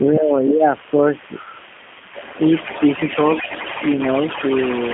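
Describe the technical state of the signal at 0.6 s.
At 0.6 s the speech sits inside a speech suppressed in double talk, from 0.5 to 0.64 s. It dips by around 10 dB, likely because the echo canceller turned the talker down during overlap. The waveform visibly narrows there.

The G.729 codec applies throughout. At 8 kbit/s it rebuilds the speech from a filter and pulses, sounding rough and synthetic. On a spectrogram, energy runs only from 200 Hz to 3.4 kHz.

There is also an echo leak throughout: a faint copy about 390 ms late and roughly 15 dB down, likely leftover loudspeaker pickup. It shows as weaker, delayed repeats of the speech.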